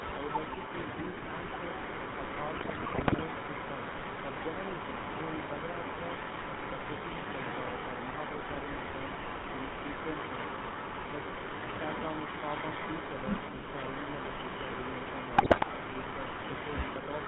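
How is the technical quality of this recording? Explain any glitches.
The technical quality is poor. The speech carries heavy codec coloration, a loud echo through almost the whole clip, two bursts of decoding damage, and one brief dip.

The GSM full-rate codec colours the entire recording, and its damage is plainly audible. It runs at 13 kbps. It models the vocal tract and excites that model with sparse, regularly spaced pulses. Much of the fine detail in the voice is thrown away. Nothing above 4 kHz survives. The result is a buzzy, gravelly roughness over all the speech. The dull, narrow top end comes from the same cause.

An echo leak runs from 0.0 to 0.96 s and again from 1.13 s to the end. A second copy of the speech trails the first by 185 ms. It is roughly as loud as the original. The likely cause is a far end using a loudspeaker. Its echo canceller failed to remove what its microphone picked up, and that sound was sent back down the line.

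GSM bit errors strike from 2.56 to 3.23 s and from 15.38 to 15.65 s. The bit error rate is about 3% in both spans. Corrupted bits reached the decoder on a weak link. Damaged filter, pitch or gain values warp the spectrum and spike the level frame by frame. The speech breaks into squawks, pops and gargling sounds for those moments.

Speech suppressed in double talk appears from 13.51 to 13.58 s, lasting 70 ms. The level drops sharply there, by around 15 dB at its deepest. The sound briefly sinks and then returns. This is likely the echo canceller reacting when both sides spoke at once. It could not separate the talker from the returning echo, so it turned everything down.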